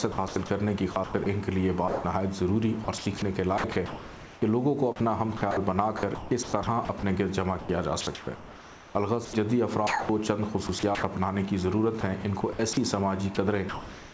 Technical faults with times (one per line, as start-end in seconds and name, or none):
0.12-11.03 sound chopped by the voice detector
12.01-14.13 sound chopped by the voice detector